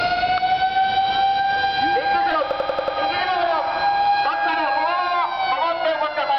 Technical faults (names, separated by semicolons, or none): DC step; system hang loop